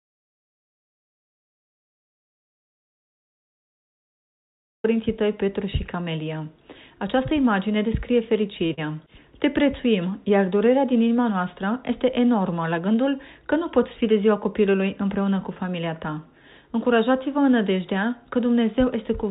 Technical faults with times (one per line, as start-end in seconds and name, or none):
0.00-4.84 audio dropout to silence
8.66-8.72 short stall from a late packet
8.74-8.92 short concealed packet loss
12.64-12.96 jitter buffer speed-up